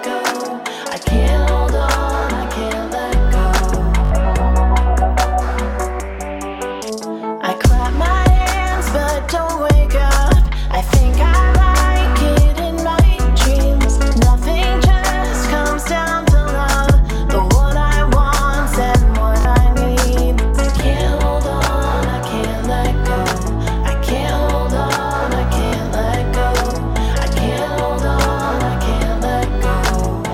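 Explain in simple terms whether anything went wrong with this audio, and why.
Bluetooth stutter: the wireless link dropped or delayed pieces of audio, so the receiver kept replaying its last tiny slice until new data arrived. This causes brief stuttering repeats of 20 to 60 ms at 4.05–4.11 s, 13.82–13.84 s, 19.41–19.45 s and 25.66–25.73 s, after which the sound skips ahead.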